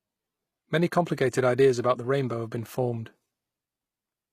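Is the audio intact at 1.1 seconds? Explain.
No. At 1.1 seconds, as throughout, the speech carries plainly audible likely HE-AAC compression, fitting a low bitrate around 24 kbps. Treble is rebuilt by copying lower bands upward, so s sounds turn gritty and lispy. A spectrogram shows repeated treble patches and nothing above 15 kHz.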